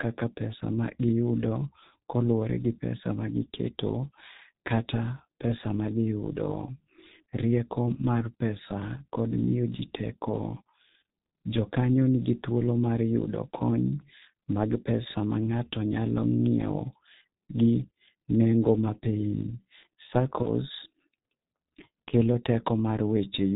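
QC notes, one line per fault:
Throughout, G.723.1 codec: the whole clip has that narrowband internet-phone sound. Nothing gets through above 4 kHz, so the speech is muffled, and the coarse, low-rate coding (it sounds like it's running near 6 kbit/s) makes it hoarse and grainy. The damage is heavy. Because the codec updates its model of the voice only every 30 ms, quick consonants blur together and lose their edges.
20.42–20.47 s, VoIP packet loss concealed by the speech codec: there's a roughly 50 ms stretch where the speech is stretched into a short buzzy tone or coloured noise that sags in level. That fits one lost 30 ms frame. The decoder filled the gap by repeating its last pitch and filter settings and turning the gain down. Each frame is built on the one before it, so the glitch runs on briefly after the real audio comes back.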